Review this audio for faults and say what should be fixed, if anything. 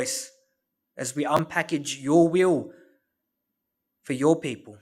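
Chunks out of order at 1.37 to 1.39 s, right after "as we": one block of about 10.7 ms was written a chunk late and played after the one meant to follow it. Nothing is lost, but the swap creates three hard joins, heard as a brief jumbled stutter.

To prevent it, sequence-number each chunk and have the writer reorder or hold blocks until their predecessor has arrived.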